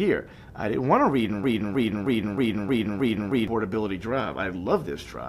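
A broken-record loop runs from 1.44 to 3.48 s: a 313 ms fragment repeats seven times back to back, replacing the audio that belonged there, likely because a stalled player or stream resent its last buffer. Waveform and spectrogram show identical blocks tiled with abrupt seams.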